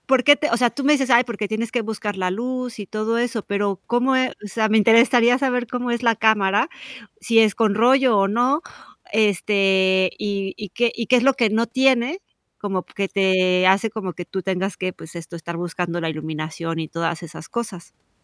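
No audible technical faults.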